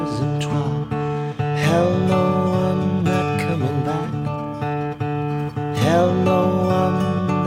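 It's a music clip, and at 0.53 to 0.55 s there's a skip ahead: about a second of the music just vanishes and the playback jumps straight on with no gap or fill, as if the jitter buffer dumped a backlog to catch up. Right after, from 0.69 to 1.52 s, you get a jitter buffer speed-up, with the receiver trimming tiny pitch-period slices so the music runs about 12% fast at unchanged pitch, shaving roughly a tenth of a second. It happens again from 3.84 to 6.26 s at about 15%, cutting roughly 0.4 s, so the tempo audibly rushes through that stretch.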